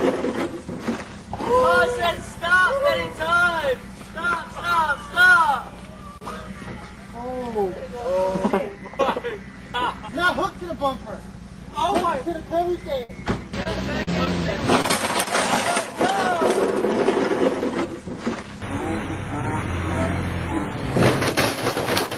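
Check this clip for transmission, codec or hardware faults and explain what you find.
Packet loss is the only problem: one longer burst followed by four brief, concealed losses, all between 13 and 15 seconds.

Burst of packet loss, 13.03 to 13.11 s: a run of packets failed to arrive in time, so the receiver extended and faded the last sound for about 55 ms, producing a held buzz or dying hiss. Playback then resumes with roughly 60 ms of audio skipped.

Short concealed packet loss, at 13.63–13.67, 14.03–14.09, 14.25–14.28 and 14.82–14.86 s: each time, a few hundredths of a second never reached the decoder. Concealment patched 12 to 36 ms by continuing the preceding sound, leaving a brief smear or wobble where 20 to 40 ms went missing.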